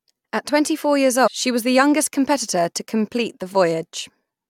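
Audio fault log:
1.26–1.28 s, damaged data in a compressed stream: A brief blip cuts in after "twenty four years", before "she was". Corrupted bytes made the decoder misread these frames. It lost sync and hunted for the next valid frame header.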